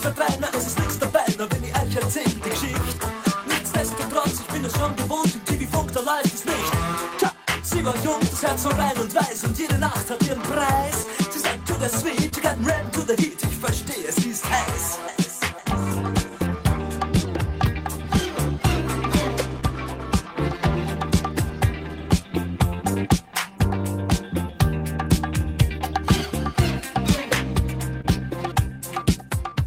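The audio runs a little slow and unsteady from start to finish. This is clock drift between sender and receiver. The sender's clock runs about 2% slower than the receiver's. The receiver's jitter buffer therefore keeps draining and has to be topped up. The result is a faint, uneven looseness in the timing across the whole clip.

Those top-ups are heard as repeated timing corrections from 0.14 s to 29.51 s. The receiver keeps repeating short slivers of sound to stay in step. Every edit goes the same way, lengthening the audio. Playback ends up at about 99% speed. Roughly 0.4 s of extra material is added over the clip. The edits are small and irregularly spaced. They come across as slight hiccups and a wavering tempo, not clean repeats.

Twice the buffer runs fully empty, giving a short stall from a late packet. The first is at 12.29 to 12.34 s. The second is at 28.01 to 28.06 s. In each case a packet arrived late. 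The receiver held the last sound for 26 ms and then 30 ms until it came. Playback then resumed from the same spot. Nothing is lost. A sound is just held too long, with a slight buzz or dip.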